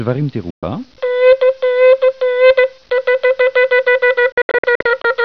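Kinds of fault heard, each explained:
Digital broadcast dropout: The receiver stopped getting usable frames and muted until clean ones returned. Each mute arrives with a very fast fade of about 3 ms, so it sounds like a cut. The first is a single hole of about 120 ms, from 0.50 to 0.63 s. The second spreads from 4.32 to 5.05 s as several short holes, the longest 72 ms, totalling 288 ms. The sound missing from those gaps is gone.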